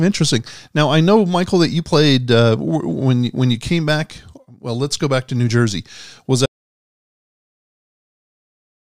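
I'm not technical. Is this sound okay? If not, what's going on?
No. The speech plays normally until about 6.46 seconds. Then it stops dead. From there to the end, there is total silence. Even the background sound of the room disappears. This is an audio dropout to silence. The cause was likely a lost input, such as a loose cable, a dropped connection or an accidental mute, while the recorder kept running and filled the gap with nothing. Whatever was said after 6.46 seconds is gone.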